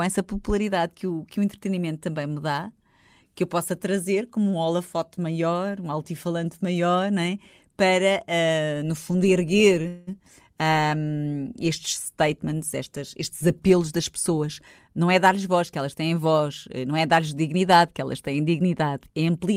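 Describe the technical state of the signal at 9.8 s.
At 9.82 to 9.86 s there is a short stall from a late packet: the jitter buffer ran dry and the receiver held the last sound for about 19 ms, then resumed where it left off, with nothing lost. On a spectrogram the harmonics run briefly flat and smeared; the waveform shows a repeated, slightly buzzy cycle.

Right after, from 9.88 to 10.09 s, comes a call audio freeze. The last sound is drawn out into a fading buzz for about 194 ms, never dropping to true silence, and the speech then carries on intact but later. The likely cause is packets held up in transit. Visually, the spectrogram shows frozen, horizontal bands that dim, and the waveform shows a decaying, periodic stretch.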